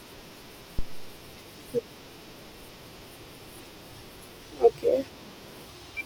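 A deep thump lands under the speech at 0.79 s, peaking at about -16 dBFS, falling away within roughly 98 ms and gone by 1.23 s. This is a phantom power thump: switching phantom power on or off on the live input sent a DC step through the coupling capacitors.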